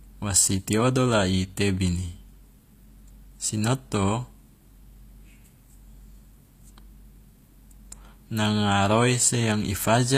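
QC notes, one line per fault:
Throughout, HE-AAC compression: plainly gritty, lispy treble with nothing above 14.9 kHz, likely from highs rebuilt out of copied lower bands, fitting a bitrate near 24 kbps.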